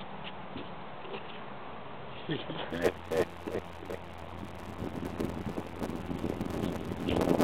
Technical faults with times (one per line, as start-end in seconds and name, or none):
2.70-7.44 block size mismatch (padded)